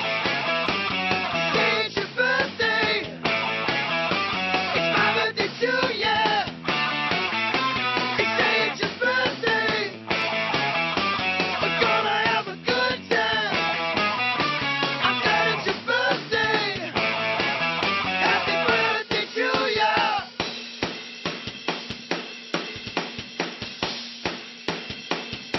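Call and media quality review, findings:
No audible faults found.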